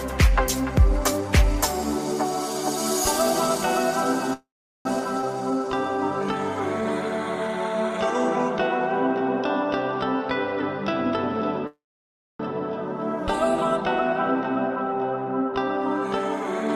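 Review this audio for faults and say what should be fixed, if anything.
Call audio freeze at 4.33–4.87 s and 11.67–12.41 s: the sound stretches into a fading tail, then silence for about 0.38 s and 0.6 s. Playback resumes where it stopped, adding 0.52 s and 0.73 s of delay. The likely cause is late packets draining the jitter buffer. A deeper adaptive jitter buffer or better network priority for the call would prevent this.

Skip ahead at 5.21–5.24 s: playback jumps forward with almost no gap, dropping about a fifth of a second of audio and trimming part of the delay built up by the first freeze. The two sides are spliced nearly directly. Time-scale compression rather than discarding audio would prevent this.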